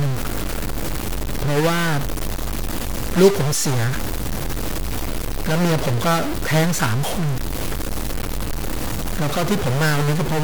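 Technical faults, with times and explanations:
throughout: stuck bit. Harsh, buzzy distortion rides on the speech, and pauses fill with noise instead of silence. This is likely one data bit held fixed, shifting about half the samples by a step of about -20 dBFS, patterned by the waveform.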